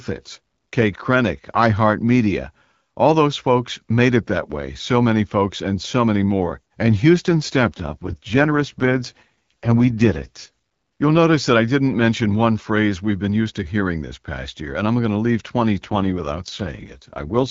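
From 7.66 to 10.48 s, and again from 15.89 to 17.50 s just after "I'm going to leave", the speech turns raspy and synthetic with no gap or narrowing of band. This is an AMR rate drop: the roughness fits the AMR-WB codec stepping down from 12.65 to 6.6 kbit/s.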